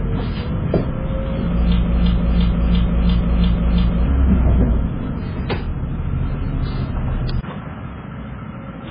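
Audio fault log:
throughout: transcoding between lossy codecs. Nothing above 5 kHz, with two different sets of codec artefacts layered. This likely fits a very low-rate MP3 re-encoded to HE-AAC, unlike a single encode's one artefact type.
1.83–4.07 s: broken-record loop. A 0.34 s fragment repeats exactly, back to back, seven times, and the intended audio is lost. This is likely a stalled stream resending its last fragment, not a random stutter.
7.41 s to end: input switched to a poorer device. After a 20 ms gap, the level drops about 10 dB and the sound turns dull, with nothing above 3.8 kHz and new noise about 55 dB down. This is likely a lower-grade microphone taking over, a sudden step rather than gradual.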